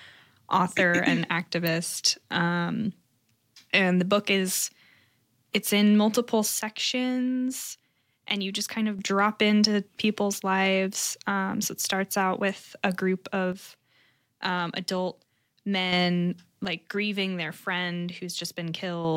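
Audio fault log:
1.67 s, electrical switching spike: a sharp snap sits on top of the speech rather than replacing it, and nothing is lost around it. That points to a nearby switch or discharge likely arcing into the line, unlike a digital dropout click, which would leave a gap in the signal.
6.59–8.99 s, 13.53–15.93 s and 16.65–19.05 s, one channel drops out: the speech falls abruptly by about 6 dB for 2.4 s each time, then snaps back at full level. The steady halving with unchanged tone fits one stereo side likely vanishing before the mono sum, unlike a fade or a gain-riding compressor, which would change gradually.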